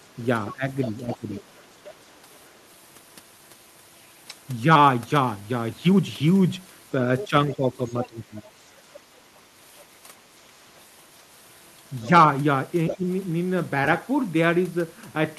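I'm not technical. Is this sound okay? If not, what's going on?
No, there are two related problems. First, the other side's voice leaking through: a quieter second voice can be heard underneath from about 0.49 to 2.5 s and again from 7.18 to 8.5 s, with brief scraps at 12.04 and around 12.9 s. The likely cause is that the talker's device plays the other person out loud on a speaker, its microphone picks that up, and the echo canceller didn't fully remove it.

Second, speech suppressed in double talk: the main talker's voice dips noticeably, in pieces, between about 0.54 and 1.23 s, again across much of 7.29 to 8.49 s, and briefly around 13.0 s. The first two dips land while that leaked voice is present. Likely, with both people speaking at once, the echo canceller couldn't tell the talker apart from the echo and turned everything down together.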